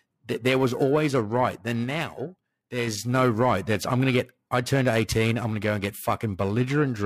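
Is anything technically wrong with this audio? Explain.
Yes. Periodic clock jitter runs through the whole of this speech clip. Interference is wobbling the converter's sampling clock at a steady rate of roughly 1 kHz, so each component of the voice picks up sidebands about 1 kHz above and below it, with the higher-frequency parts affected most. The result is a rough, metallic edge riding on the speech that disappears whenever the talker pauses into silence.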